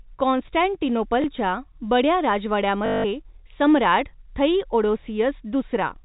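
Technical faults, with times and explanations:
1.22 to 1.24 s, packet loss with last packet repeated: a 20 ms gap, likely one packet, filled by replaying audio. It sounds like a small blip.
2.86 to 3.04 s, packet loss with last packet repeated: 180 ms of looped audio buzzes at 50 Hz, a robotic stutter.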